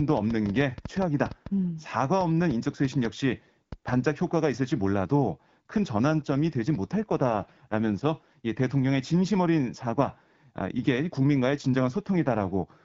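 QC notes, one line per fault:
0.10–3.94 s, train of clicks: about 5.2 per second at an irregular pace, roughly twenty in all, with peaks about 10 dB above the speech. They tick through the pauses too. The likely source is interference from nearby equipment or a faulty connection or power supply injecting repeated pulses.
6.09–8.08 s and 11.51–12.62 s, AMR rate drops: the speech turns rougher and more synthetic, with no gap and no loss of bandwidth, then clears as the AMR-WB link recovers. This fits the network stepping the codec down from 12.65 to 8.85 kbit/s to spend bits on error protection.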